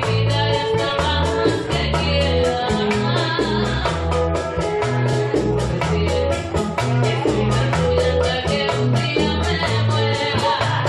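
At 5.12 s, repeated frames: a 46.4 ms block, which fits two compressed frames, plays twice, producing a brief stutter and lengthening the audio by 46.4 ms.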